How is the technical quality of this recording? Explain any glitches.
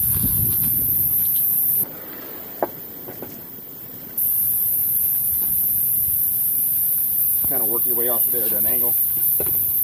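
One glitch stands out. From 1.84 to 4.18 s the sound jumps to double speed and an octave higher: audio read two samples at a time, each pair taken as one frame.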